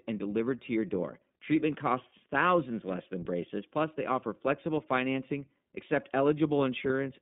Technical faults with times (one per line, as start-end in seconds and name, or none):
0.00-7.22 iLBC codec
6.88-6.91 lost iLBC frames